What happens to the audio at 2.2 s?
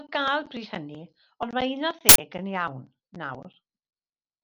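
At 2.2 s the speech is coming out of an uninitialised buffer fault that runs from 2.09 to 2.18 s. For about 93 ms a block of playback memory was sent to the output before any audio had been written into it, so whatever data was left in that memory was read as samples. The result is a short, loud burst of harsh digital noise. Its length fits a 4096-sample buffer.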